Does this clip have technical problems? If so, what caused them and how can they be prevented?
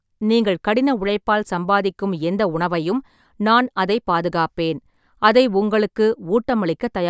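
No, there are no technical problems to point to in this clip. Nothing here calls for a cause to be traced or a fix to be applied.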